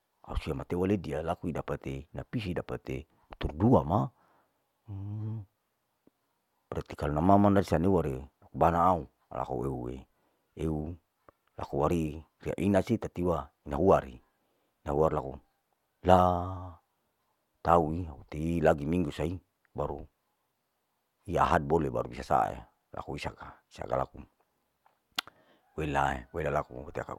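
No technical faults are audible.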